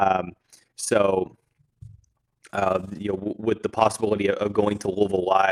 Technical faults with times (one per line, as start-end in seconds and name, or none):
0.00-5.51 overlap-add ripple